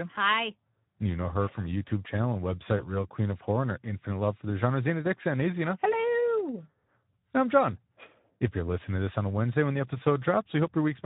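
From the start, the whole clip carries plainly audible Speex codec damage. This CELP speech codec runs here at a rate that fits about 11 kbps. Too few bits reach the excitation. The speech turns noisy and hoarse.

At 2.77 s, just after "channel and", there is VoIP packet loss concealed by the speech codec. About 20 ms of audio went missing. The decoder extended its last pitch and filter at falling gain. The speech stays disturbed until about 2.94 s.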